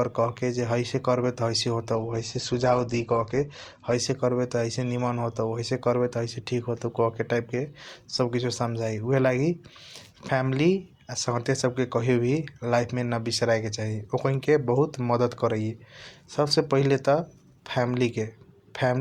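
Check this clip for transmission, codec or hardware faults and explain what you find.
One codec-related transmission fault is audible. From 1.94 to 3.94 s, the adaptive stream switches to a lower bitrate: the connection slowed, so the speech suddenly dulls and turns grainy, with no gap. On a spectrogram, the energy above 8.2 kHz cuts off flat, which fits a drop from about 64 to 16 kbit/s.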